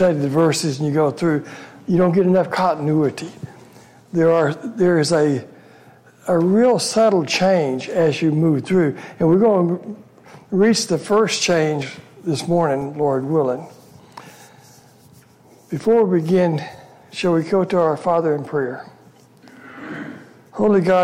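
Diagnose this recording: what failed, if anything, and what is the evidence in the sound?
The driver or buffer stage is at fault: periodic USB or driver dropouts. From 11.82 to 15.82 s there's a tick about once a second, about five in all, each a few-millisecond gap of silence where something stalled the USB bus or audio driver and samples got lost.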